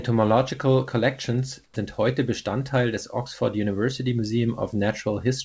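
At 1.64 s the real background drops out for about 120 ms, to 1.76 s, and you get comfort noise in place of the background: a flat, featureless hiss about 16 dB quieter. That's likely discontinuous transmission kicking in while the sender thought nothing was happening.

Overlapping the end of that gap, from 1.72 to 1.76 s, the next bit of speech has its onset clipped by the voice detector. Roughly 40 ms of the start never made it through, so the sound pops in abruptly with no soft lead-in, likely because the detector was slow to notice it. The G.722 call path holds everything under 8 kHz.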